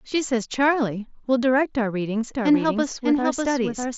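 A second, slower capture path or an edit that left two copies out of step is likely behind the doubled audio track in this short speech recording. From 2.34 s to the end, a full-band copy of the speech runs roughly 0.7 s behind the original at about 5 dB lower. It cuts in abruptly, with no decay or room colour. The Bluetooth mSBC headset link caps the band near 7.7 kHz.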